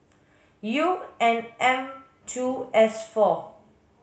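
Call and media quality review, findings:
No faults found in review.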